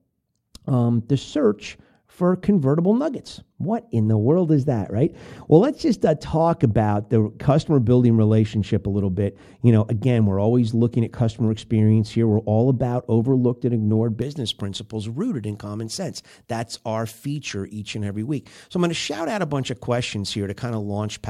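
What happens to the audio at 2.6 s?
At 2.6 s the speech sounds dull and muffled, with the treble rolled away. That is de-emphasis applied wrongly: a smooth high-frequency cut, about 11 dB down at 10 kHz relative to 1 kHz, spanning 0.0 to 14.22 s and ending just before "principles rooted in common".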